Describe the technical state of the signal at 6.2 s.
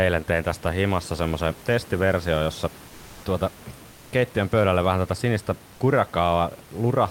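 At 6.2 s the signal is intact, with only the room's own background noise sitting about 25 dB below the speech.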